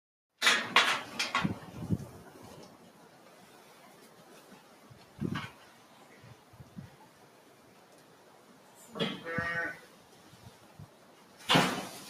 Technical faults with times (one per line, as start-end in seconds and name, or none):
0.00-12.09 noise suppressor applied to music or sounds